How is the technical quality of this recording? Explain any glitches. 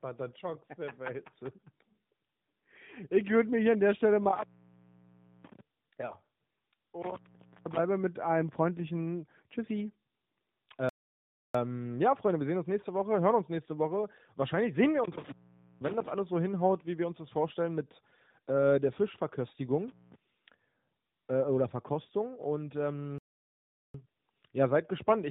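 The recording is degraded by coding throughout, with five separate dropouts of two different kinds.

Tandem speech coding runs through the whole clip. The speech appears to have passed through AMR-NB twice with a G.711 link between, each coder reworking the last one's damage. The result is rough, muffled, warbly speech, worse than a single narrowband codec would give.

Intermittent contact cuts the sound at 4.23–5.60 s (open about 1.0 s), at 7.02–7.79 s just before "mit einem freundlichen", and at 15.04–16.09 s between "sehen wir" and "alles so hinhaut wie" (each open about 0.49 s). A connection opens briefly. Crackle marks each edge, and faint hiss fills each gap, unlike a stall's clean silence.

Playback stalls at 10.89–11.55 s (0.65 s) and at 23.18–23.94 s (0.76 s), the second just before "ja seid gespannt". The player was likely starved of data or blocked. The output goes cleanly silent with no crackle or hiss, then resumes.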